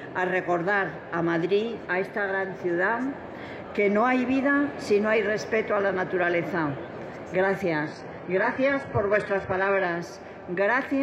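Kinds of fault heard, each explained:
Adaptive stream at a lower bitrate: from 7.84 to 9.84 s the stream switches to a much lower-bitrate version, so the treble is cut above 14.7 kHz and codec artefacts rise, which fits a drop from about 96 to 12 kbit/s. Unlike a dropout, the sound never breaks, and quality changes abruptly both ways.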